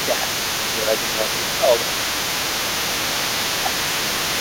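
Throughout, from 0.0 to 4.4 s, the other side's voice leaks through about 10 dB under the speech, likely uncancelled loudspeaker echo, visible as a fainter second harmonic pattern in the spectrogram. At 0.06–0.26, 0.58–1.39, 1.58–1.76 and 3.44–3.63 s, speech is suppressed in double talk, likely by the echo canceller ducking both voices. The first drop is about 10 dB and the rest about 5 dB, seen as waveform dips.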